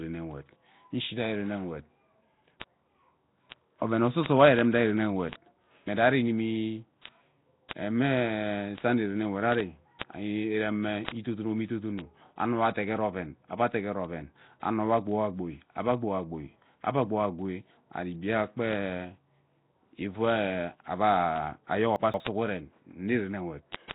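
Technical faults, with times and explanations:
Throughout: Nellymoser compression. The speech has a rough, hissy halo and a smeared, underwater quality, with nothing above about 3.9 kHz. This is likely the Flash-era Nellymoser Asao codec at 16 kbps. It codes short blocks at a fixed, low bit budget. Bands too weak to earn bits are filled with noise instead. That noise fill gives the hiss, and the coarse blocks blur the speech. The damage here is heavy.
0.15 to 23.91 s: word clock ticks. Sharp ticks of uneven strength repeat at a steady rate, about one every 0.07 s, some 300 in all. A digital link was likely read by a device on its own clock, not locked to the sender. The clocks drift apart by roughly 300 ppm. Each time they slip past each other, a sample is dropped or repeated. The misread samples make each tick.
2.60 s, 7.69 to 7.71 s, 9.99 to 10.01 s and 11.05 to 11.08 s: pre-echo. A short hiss comes just before a sharp attack, lasting 15, 25, 24 and 37 ms in turn. 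The attacks sound soft or smeared. A transform codec spreads its quantisation noise over a whole block. When the attack sits late in that block, noise sized for the loud part leaks into the quiet moment ahead of it.
21.96 to 22.20 s: chunks out of order. A 60 ms chunk of audio plays three chunks late, after the chunks that should follow it. Nothing is lost, but the order is wrong. The result is a brief jumbled, garbled moment. There are three hard joins where the pieces meet out of sequence. This fits a chunk that arrived or was written late.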